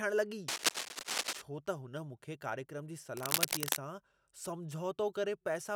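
Cable scratch noise appears from 0.48 to 1.42 s and again from 3.17 to 3.76 s: dense, uneven scratching bursts over the speech, first about as loud as it, then somewhat louder. Rapidly changing contact resistance in a worn cable, connector or control being moved is the likely cause.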